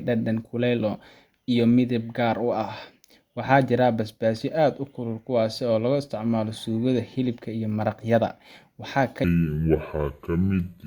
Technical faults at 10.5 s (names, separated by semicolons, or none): section at the wrong speed